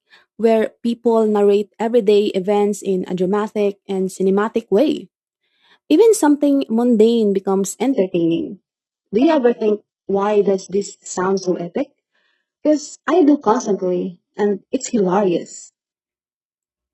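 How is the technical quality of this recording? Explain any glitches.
Quality drops partway through. From 7.93 to 15.93 s, right after "something mundane becomes", an adaptive stream at a lower bitrate took over as throughput fell. The speech instantly loses everything above 8 kHz and turns thin, which fits a very low-rate HE-AAC rendition, and it never gaps.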